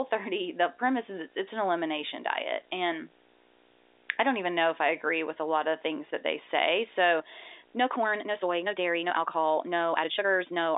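From 7.18 s to the end, software likely squeezed a time-stretched section to 1.8 times speed while keeping pitch, so the speech turns abruptly rushed.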